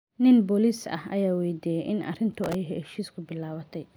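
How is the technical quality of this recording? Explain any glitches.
The speech has one clear glitch. From 2.33 to 2.55 s, a gritty crackle tears across it: processor overload crackle, where a dozen or more very short buffers missed their deadlines and replayed stale audio with hard edges.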